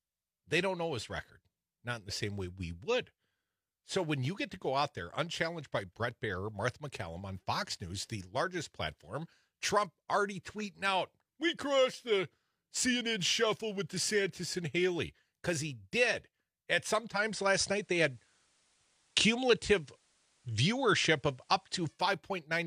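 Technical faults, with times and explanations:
17.10–22.04 s, digital radio blending to analogue: over a 165 ms cross-fade the speech shifts about 4 dB in level and gains faint hiss roughly 40 dB down, as the receiver swaps its lost digital stream for the station's FM broadcast.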